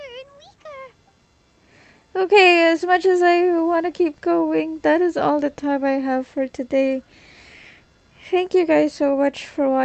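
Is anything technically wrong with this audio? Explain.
No, nothing technically wrong can be heard here.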